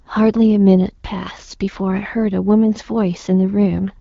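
No technical faults can be heard anywhere in this speech clip. It comes through the AMR wideband (HD Voice) codec at 12.65 kbit/s, a rate where that codec keeps speech clear, and only light coding damage can be heard.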